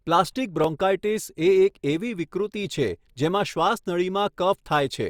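Clock drift buffer slips, likely from two clocks disagreeing by about 700 ppm, drop or repeat a few dozen samples, giving about five clicks every 1.06 s from 0.64 to 4.89 s.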